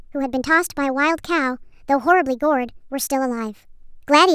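Throughout, samples captured at one rate are played at a higher one with no conversion: a wrong sample rate. The speech runs 1.45 times too fast and 6.45 semitones high, which fits 22 kHz audio played at 32 kHz, so it sounds hurried and shrill.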